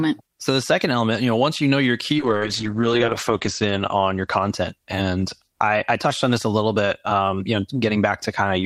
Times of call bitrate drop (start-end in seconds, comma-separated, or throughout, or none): 2.18-5.31